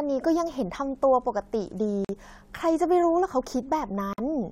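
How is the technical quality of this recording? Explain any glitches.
The speech is broken twice by short dropouts. Gaps at a join of encoded pieces open at 2.05–2.09 s (45 ms) and 4.13–4.18 s (51 ms). Separately encoded segments were spliced without trimming encoder delay and end padding, leaving brief silences before the sound resumes where it stopped.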